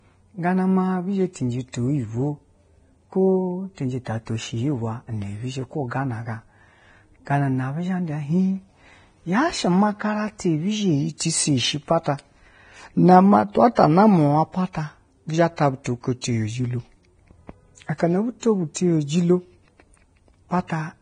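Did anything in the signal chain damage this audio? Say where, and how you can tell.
Yes, at the codec stage. Throughout the speech there is nothing above 9.7 kHz, and the treble is hissy and grainy, pointing to a low bitrate of roughly 23 kbps. Heavy lossy coding, likely Vorbis, replaced fine detail with noise. Band-limited line noise wouldn't sound this grainy.

Pre-echo, also from the codec, puts a brief hiss just before sharp onsets at 13.75 s, 16.21–16.24 s, 17.98–18.00 s and 18.74 s, spreading 16 to 24 ms. Block-spread quantisation noise leaks ahead of each attack. Reverb or echo would trail after it instead.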